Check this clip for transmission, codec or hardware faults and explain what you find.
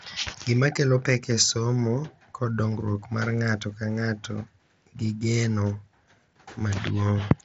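One transmission fault is audible. Concealed Bluetooth headset packet loss at 0.76 s, just before "kelo pek e somo": a 7.5 ms gap, consistent with one lost packet, was patched by repeating the closest-matching recent waveform, leaving only a barely noticeable seam. The speech is carried by the mSBC headset codec, with its light graininess on louder sounds.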